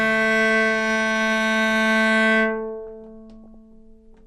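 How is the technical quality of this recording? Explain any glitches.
The recording is clearly degraded by audible compression throughout, plus one short burst of corruption near the end.

MP2 compression, throughout: the sound is dull, with gurgling, grainy distortion. The likely cause is MPEG Layer II coding starved of bits, consistent with about 80 kbps, so upper sub-bands drop out intermittently and the remaining bands are coarsely quantised.

DAB burbling, 3.44 to 3.55 s: a brief burst of burbling corruption, hitting 8 frames, sits over the sound. A small fraction of bit errors slipped past error correction, corrupting samples so noise blips appear in single sub-bands.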